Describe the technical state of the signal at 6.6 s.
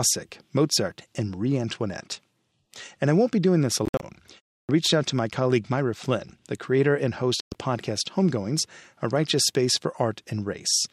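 At 6.6 s the speech signal is intact, with no dropout, distortion or other fault audible.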